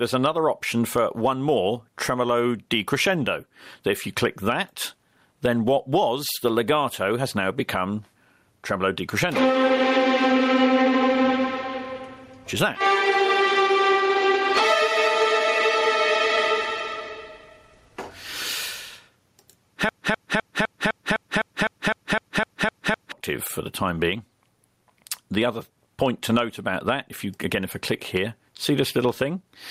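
Gain pumping runs through the whole clip. The gain swings by around 20 dB, likely from excessive gain hitting a fast limiter.

From 19.89 to 23.12 s, a broken-record loop repeats one 0.25 s fragment 13 times. This was likely a stalled stream, and the audio that should have played there is lost.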